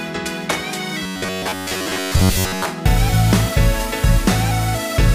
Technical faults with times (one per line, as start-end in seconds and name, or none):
1.03-2.65 robotic sound from repeated short buffers